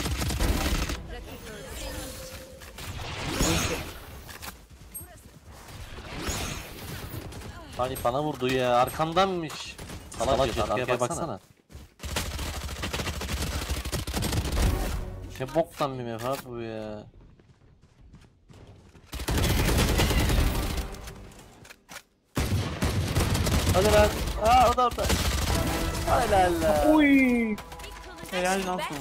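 Nothing in the audio stood out as a technical problem on listening.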